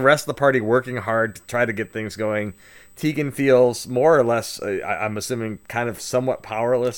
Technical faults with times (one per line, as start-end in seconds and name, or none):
0.00-6.97 USB whine